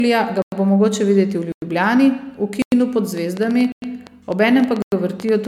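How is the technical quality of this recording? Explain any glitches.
The recording has three distinct problems: repeated lossy coding, regular dropouts, and a burst of clicking in the second half.

The generation loss runs throughout. The audio was likely encoded as MP3 at 128 kbit/s several times over, perhaps about three passes. Each pass requantises on a shifted frame grid, so errors pile up. The speech sounds swirly and hollow, with softened attacks, and there is nothing above about 20.1 kHz.

A gap between chunks appears at 0.42, 1.52, 2.62, 3.72 and 4.82 s, the first just before "bo mogoče". The audio was delivered in 1.0 s pieces with 100 ms of silence inserted at each join. These are short holes at a steady rhythm.

A train of clicks runs from 3.18 s to the end. Pulses arrive about eight times per second at uneven spacing, likely from electrical interference or a faulty connection. 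They peak about 5 dB above the speech and tick over words and pauses alike.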